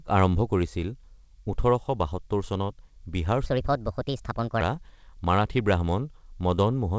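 From 3.46 s to 4.61 s the speech suddenly turns high and hurried, racing along at 1.36 times its proper pace with the pitch lifted by about five semitones, then drops back to normal. Because speed and pitch jump together and return together, this is a section at the wrong speed, likely from a player or editor running that stretch against the wrong clock. The band-limited sound of the call path, with nothing above 8 kHz, stays the same throughout.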